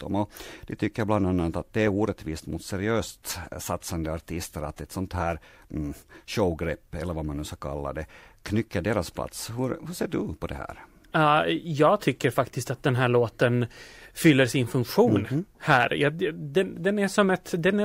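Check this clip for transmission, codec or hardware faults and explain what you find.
Listening through the speech, I find no faults to report. Nothing in the sound calls for an explanation.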